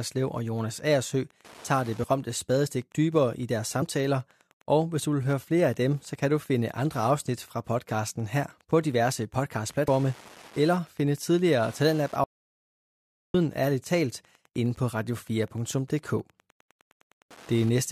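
Throughout the speech runs a Wi-Fi interference tick at a 102.4 ms beacon period, about ten clicks a second, sitting roughly 30 dB below the signal. A nearby radio's transmissions are being rectified in the audio circuit, producing that steady buzzing tick.

Compressed frames skipped appear at 2.02 to 2.04 s, between "tager det" and "spadestik dybere i deres"; at 3.81 s, right after "spadestik dybere i deres"; and at 9.87 s. Each is a point where the decoder jumped ahead by whole 23.2 ms frames, losing about one, two and four frames respectively.

An audio dropout to silence runs from 12.24 to 13.34 s, just after "eller finde tidligere". For 1.1 s the sound stops completely, with no room tone, and resumes mid-flow. The likely cause is the input being lost while the recorder kept writing silence.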